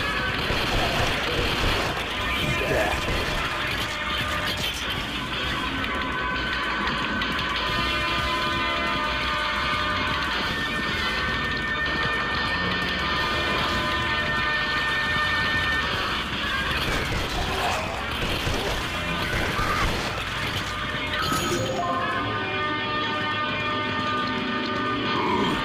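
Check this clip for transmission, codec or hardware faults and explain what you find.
Lost LE Audio frames occur at 0.49, 3.52 and 19.20 s. Each gap lasts 10 ms, which fits one lost frame. The LC3 decoder repeats the previous spectrum with random signs, producing a brief noisy smear.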